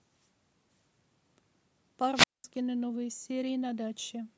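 A brief swell of hiss at 2.15 s gives way to near silence lasting about 207 ms before the speech returns around 2.44 s. This is a wireless microphone squelch dropout: the FM radio signal faded, and the receiver's squelch muted the output until reception recovered.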